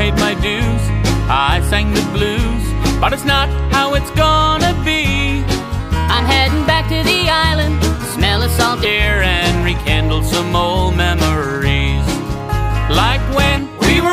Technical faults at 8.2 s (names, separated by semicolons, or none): section at the wrong speed